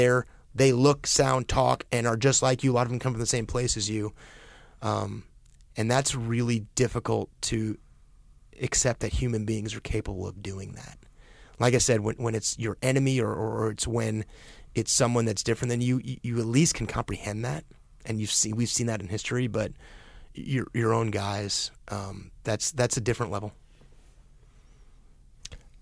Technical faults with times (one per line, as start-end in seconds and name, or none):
none